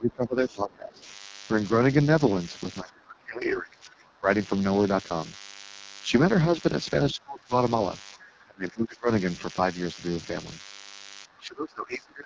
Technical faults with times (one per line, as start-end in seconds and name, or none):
0.00-12.25 DECT cordless phone buzz
0.00-12.25 AMR wideband (HD Voice) codec
0.00-1.02 speech suppressed in double talk
0.98-1.14 other side's voice leaking through
2.83-4.27 speech suppressed in double talk
7.13-7.53 speech suppressed in double talk
8.17-9.07 speech suppressed in double talk
11.26-12.25 speech suppressed in double talk